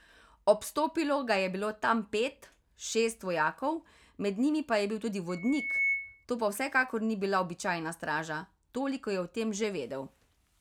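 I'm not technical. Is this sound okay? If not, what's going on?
No, there's a problem. From about 5.29 to 6.25 s you get loudspeaker feedback squeal: the mic catches its own speaker, and a shrill 2.2 kHz tone swells up over roughly half a second until it rings a bit louder than the speech.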